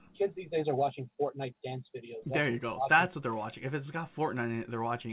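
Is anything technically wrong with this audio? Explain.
No, nothing here is technically wrong. The audio went through a call path, and nothing reaches above 4 kHz, which fits G.711 A-law at 64 kbps.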